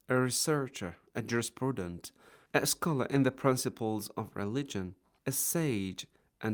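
Nothing stood out as a technical fault on listening to the clip.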